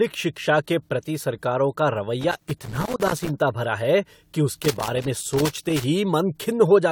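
Throughout the speech, the audio was likely decoded and re-encoded several times with a lossy AAC-type codec, about four passes at a rate consistent with 96 kbit/s. Each pass re-quantises on a shifted frame grid, so the generation loss builds into a swirly, hollow smear with softened attacks, and nothing remains above 20 kHz.

A worn or dirty contact then repeatedly makes and breaks, chopping the signal into loose connector crackle: an irregular scratchy burst from 2.21 to 3.29 s, after "के प्रति सरकारों का" and ending before "भरा है कि", and again from 4.62 to 5.84 s, following "भरा है कि".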